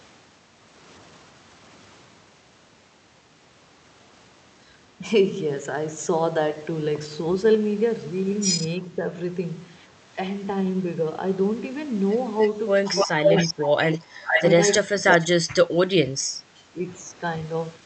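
Speech suppressed in double talk hits this speech recording at 8.82–9.05 s (a shallow dip of about 5 dB), then at 13.05–13.84 s and 14.86–16.91 s, where it drops by up to about 25 dB. The likely cause is an echo canceller that is ducking its own talker while the far side speaks. Echo leak occurs at 12.4–13.54 s, 13.91–14.76 s and 15.09–15.24 s. A copy of the voice returns after 303 ms and then 463 ms, at roughly speech level and later about 5 dB lower, likely from loudspeaker pickup that the canceller left unremoved.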